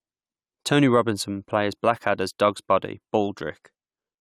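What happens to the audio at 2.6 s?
Nothing goes wrong at 2.6 s: the speech there is intact, with no dropout, click, glitch or other fault.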